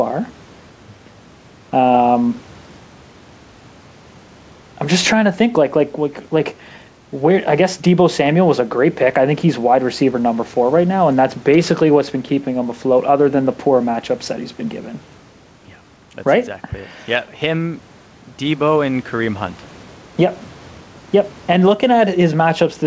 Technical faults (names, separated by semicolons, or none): gain pumping